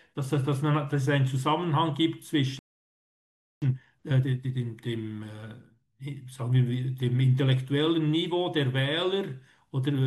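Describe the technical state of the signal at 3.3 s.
At 3.3 s the speech is in the middle of a playback stall, a gap of about 1.03 s running from 2.59 s to 3.62 s. The flow cuts off abruptly and the output is silent until it resumes. The likely cause is the player running out of buffered data or its thread being blocked. On a waveform this shows as a flat line across the span, and a spectrogram shows a blank vertical band cutting through the speech energy.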